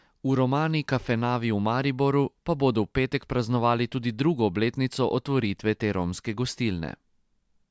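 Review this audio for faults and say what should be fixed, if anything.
Nothing stood out on listening to this speech, so there is nothing here that needs fixing.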